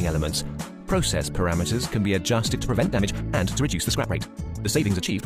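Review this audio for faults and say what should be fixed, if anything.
A time-stretched section runs from 2.48 s to the end, where software likely compressed the audio to about 1.78 times normal speed, discarding short slices to hold the pitch. The pace jumps abruptly there, sounding rushed while the pitch stays unchanged. To prevent it, edit or pad content to fit the required length rather than squeezing the audio with time-stretching.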